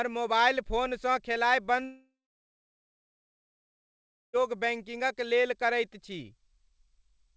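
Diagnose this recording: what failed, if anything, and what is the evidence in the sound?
Between 1.85 and 4.36 s the speech fades into about 2.2 s of silence, then resumes with material lost, likely a long network dropout.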